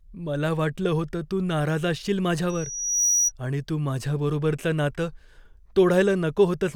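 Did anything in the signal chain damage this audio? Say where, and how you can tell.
Yes. A microphone picked up a loudspeaker it was feeding, and the acoustic loop's gain rose above one at 5.8 kHz, causing loudspeaker feedback squeal. From 2.49 to 3.32 s, a single tone swells over roughly half a second to about 5 dB above the speech, then stops.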